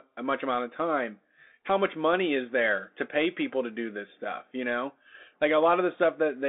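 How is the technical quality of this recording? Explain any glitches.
The technical quality is poor because the whole recording carries narrowband headset coding. Throughout the clip, a Bluetooth CVSD headset codec confines the speech to roughly 250 Hz to 3.6 kHz, with nothing above 3.8 kHz, which fits a 64 kbps CVSD link. Its one-bit delta coding leaves plainly audible grainy distortion and scratchy, muffled sibilants.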